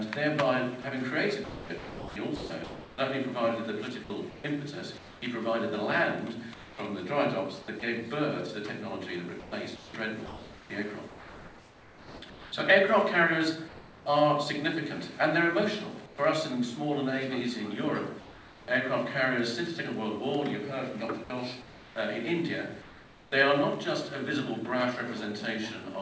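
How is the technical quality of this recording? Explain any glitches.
The recording has repeated gaps where a voice detector appears to have stopped transmission and comfort noise filled in. The audio has no content above 8 kHz, which fits a G.722 call codec at about 64 kbps.

Sound chopped by the voice detector occurs from 0.82 to 5.22 s and from 9.40 to 14.06 s. The sender likely toggled transmission on and off several times. About 1.6 s and 2.5 s of sound, respectively, give way to synthetic noise, leaving multiple holes.

Comfort noise in place of the background appears at 6.54 to 7.82 s, 16.06 to 16.18 s, 18.20 to 18.68 s and 21.24 to 23.32 s. During pauses, the receiver likely generated smooth noise instead of the real background. At 16.06 s it drops about 5 dB, and at 18.20 s about 2 dB.

Sound dropped by the voice detector happens at 7.80 s, where 20 ms vanishes. It happens again from 21.24 to 21.30 s, where about 40 ms is lost. 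The detector likely mistook this sound for background and stopped sending. Steady noise covers each brief gap until the sound returns.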